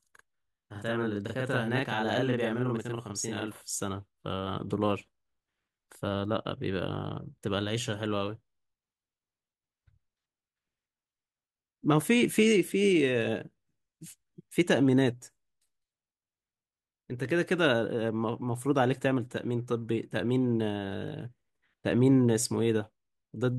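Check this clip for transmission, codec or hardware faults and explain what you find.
One fault is present: a channel delay (doubling) from 0.0 to 3.78 s in this speech clip. One channel arrives 40 ms late and both are summed to mono, so every syllable is followed by an equal-level copy, heard as a doubled, slapback sound. On the waveform each onset appears twice, 40 ms apart. The spectrogram shows smeared onsets and fine comb notches spaced 25 Hz apart.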